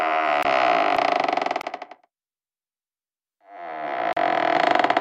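A short hole opens from 0.43 to 0.45 s and from 1.61 to 1.64 s, with a longer one of about 36 ms from 4.13 to 4.17 s. This is a block of digital silence. The 21 ms gaps fit a 1024-sample output buffer left unfilled in time, so the sound cuts straight to silence and back.

At 0.97 s and again at 4.57 s the sound jumps forward, skipping roughly a fifth of a second. This is audio missing between chunks, likely lost while the recorder closed one 2-second chunk and opened the next, with the two sides joined directly.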